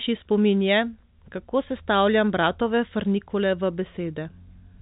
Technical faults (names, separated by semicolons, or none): none